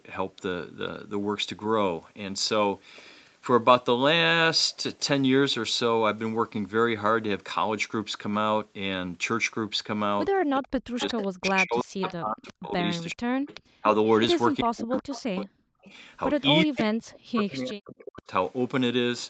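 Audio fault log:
10.59–13.85 s, 14.61–15.83 s, 16.64–18.28 s: speech suppressed in double talk. The echo canceller could not separate the near talker from the loudspeaker echo while both sides spoke, and likely attenuated both together. The speech dips by up to about 40 dB and drops out in fragments. The affected time adds up to roughly two seconds in the first stretch, one second in the second and one and a half seconds in the third.
10.99–11.28 s, 12.08–12.53 s, 13.1–13.62 s, 14.97–17.17 s: echo leak. Part of the loudspeaker sound on the far side reached its microphone and slipped past cancellation, most likely because the canceller could not remove all of it. That residue was sent back into the call. A copy of the speech trails it by 378 ms. It is about 15 dB below the speech in the first burst, about 20 dB below in the next two, and only about 10 dB below in the long final stretch.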